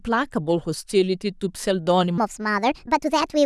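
From 2.18 s to 3.45 s, a section at the wrong speed: the speech runs 1.42 times too fast, rising about seven semitones and sounding hurried, likely from a wrong playback clock. Pitch and tempo change together, unlike a pitch shift, which keeps timing.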